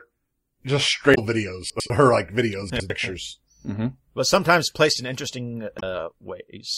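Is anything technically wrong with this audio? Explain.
Yes. There are two kinds of fault in this speech.

Damaged data in the compressed stream occurs at 1.11 to 1.18 s and at 5.76 to 5.83 s. Corrupted bytes make the decoder misread frames and lose sync. It then hunts for the next frame header. Each spot sounds like a brief chirp or squawk.

Chunks are out of order at 1.7 to 1.9 s and 2.7 to 2.9 s. In each, a 100 ms chunk plays one chunk late, after the one that should follow it. Nothing is lost, but the order is wrong at hard joins and the speech briefly sounds jumbled.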